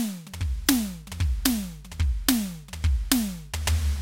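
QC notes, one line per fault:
1.37–3.72 s, drift correction step: the music abruptly plays about 5.8% slow, dropping pitch roughly 104 cents, a semitone, then snaps back, likely from clock-matching software changing rate in one step. Spectrogram harmonics step down together, waveform events stretch.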